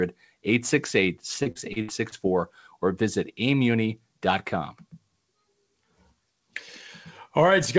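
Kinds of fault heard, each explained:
Repeated packet loss (robotic sound): from 1.43 to 2.15 s the speech breaks up as five packet gaps, the longest 66 ms, are each patched by stretching the previous sound, so about a quarter of that stretch is synthetic fill, giving a choppy texture with pieces missing.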